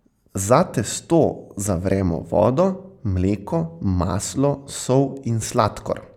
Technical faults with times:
none

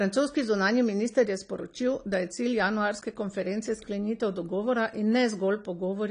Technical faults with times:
0.00-6.10 AAC compression

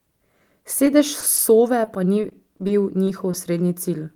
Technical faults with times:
1.20-1.24 short stall from a late packet
1.36-1.40 short concealed packet loss
1.84-2.83 repeated packet loss (robotic sound)
3.31-3.35 short concealed packet loss

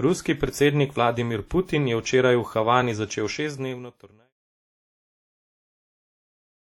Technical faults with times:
0.00-6.76 WMA compression

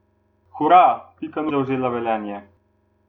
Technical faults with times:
1.49-1.51 damaged data in a compressed stream

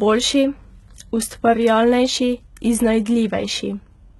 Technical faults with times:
0.00-4.19 HE-AAC compression

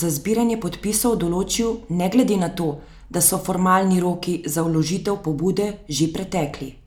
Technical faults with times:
none

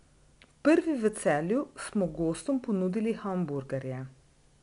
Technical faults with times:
0.00-4.63 4-bit ADPCM compression

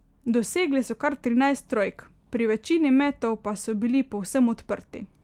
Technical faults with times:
none

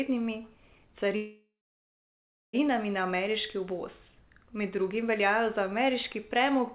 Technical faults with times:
1.16-2.55 call audio freeze

